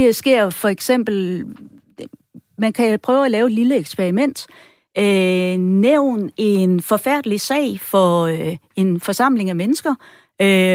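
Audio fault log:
No technical faults can be heard in this speech recording, and the signal holds steady in level and continuity throughout.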